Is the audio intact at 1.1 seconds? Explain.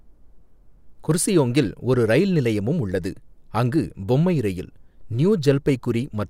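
No. At 1.11 s the speech carries a single sharp click, seen as a thin vertical line across the spectrum. The likely cause is dropped samples: a fraction of a millisecond is missing, so the waveform jumps abruptly to a later value without removing any audible sound.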